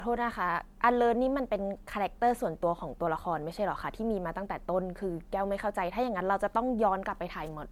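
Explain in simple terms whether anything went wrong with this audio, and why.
Something did go wrong, and it runs through the whole clip rather than hitting one spot. The speech has a swirly, hollow quality, and the starts of sounds come out soft and blurred instead of crisp. That's generation loss, likely from the audio being squeezed through an MP3-style compressor around four times over. Each round trims the sound a little differently, so the damage piles up and sounds worse than a single pass would.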